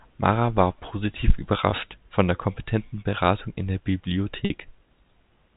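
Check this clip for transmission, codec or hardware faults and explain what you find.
Two brief dropouts show up in the speech, carried over a G.711 telephone channel that limits the band to 4 kHz. Packet loss with pitch repetition at 1.70–1.72 s and 4.45–4.50 s: about 20 ms and 50 ms of audio went missing, and the receiver repeated the last pitch period to fill each gap, giving a momentarily held, buzzy tone at the first.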